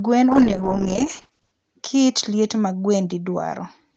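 From 0.33 to 1.59 s, a call bitrate drop squeezes the Opus encoder, consistent with a fall from 32 to 9 kbps, so the speech turns rough and watery before recovering.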